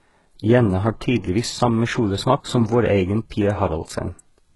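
Throughout the speech, s sounds are gritty and metallic, with nothing above 11.5 kHz. The likely cause is heavy HE-AAC compression, rebuilding treble from copied lower bands.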